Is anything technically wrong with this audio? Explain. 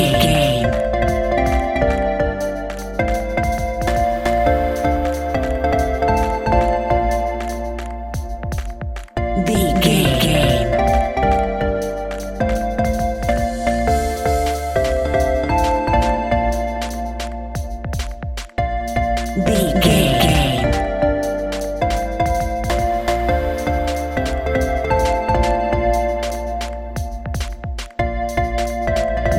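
Yes. Throughout, every sound repeats at roughly equal loudness about 400 ms later, a dry echo with no decay: a doubled audio track, likely from a second, slower capture path.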